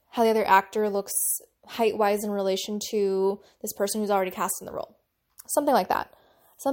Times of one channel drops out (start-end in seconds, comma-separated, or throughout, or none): none